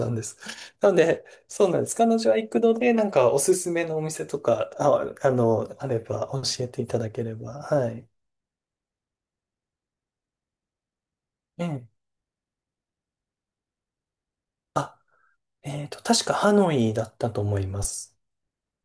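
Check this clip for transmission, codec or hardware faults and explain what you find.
Nothing turned up here to point to as a transmission, codec or hardware problem, so there's nothing to flag in this one.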